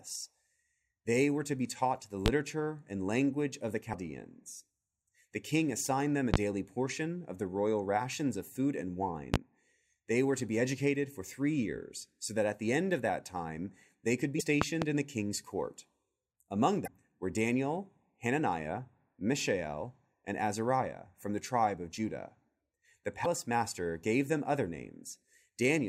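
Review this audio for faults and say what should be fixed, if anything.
Loud pops hit at 2.26, 6.34 and 9.34 s, and a double pop at 14.62 to 14.85 s, before "in the king's court". Each peaks about 25 dB above the speech. The likely cause is a voltage spike from a plug, switch or static. Secure connections and ground the equipment to prevent them.

Damaged data in a compressed stream causes brief glitches at 3.93 s, at 14.37 to 14.41 s between "that time they could" and "in the king's court", at 16.84 to 16.88 s, and at 23.22 to 23.26 s before "master gave". Corrupted frames make the decoder lose sync and skip ahead. Re-encode from an intact source and verify the file's integrity.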